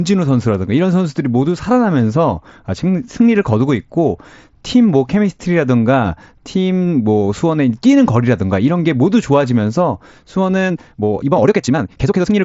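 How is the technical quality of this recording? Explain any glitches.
The main glitch sits right at the end: from 10.61 s to the end of the clip, the speech suddenly runs about 1.62 times faster while the pitch stays where it was. That's a time-stretched section. Software was likely squeezing that stretch to fit a shorter length, and it keeps the pitch by cutting out short slices of the audio and butting the rest together. Those dropped slices are why it sounds rushed, with the pace jumping abruptly. The top end stops at about 8 kHz, which is what you'd expect from an mSBC Bluetooth headset link.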